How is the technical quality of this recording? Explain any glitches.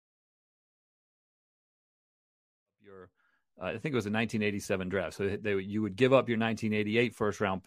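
No glitches in this speech recording; the level rises smoothly from around 2.5 s to full by 4.1 s with no step or click, as an editor's fade-in would.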